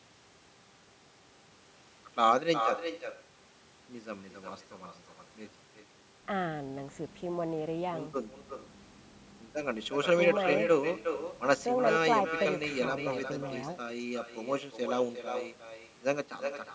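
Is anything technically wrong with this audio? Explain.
Yes. Throughout the speech there is echo with no canceller. On the far end, the call is played over a loudspeaker, that loudspeaker feeds straight back into the microphone, and nothing strips it out before it returns. Each phrase is repeated about 7 dB down, roughly 0.4 s late, as a thinner shadow of the talker. The whole clip is also band-limited to 8 kHz by the call's normal microphone processing.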